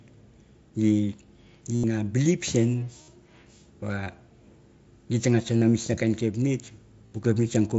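Speech heard through a wideband mSBC Bluetooth headset, with bandwidth topping out near 8 kHz, carries concealed Bluetooth headset packet loss at 1.75–1.84, 3.03–3.08, 4.04–4.06, 5.60–5.62 and 7.07–7.12 s. Lost packets are patched by repeating recent waveform, so longer gaps sound buzzy. On a waveform these gaps appear as short periodic stretches at full level, and on a spectrogram as evenly spaced harmonic bands.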